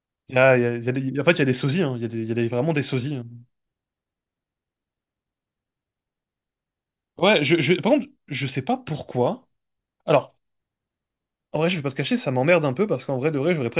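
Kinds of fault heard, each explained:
Nothing stood out on listening to this speech recording.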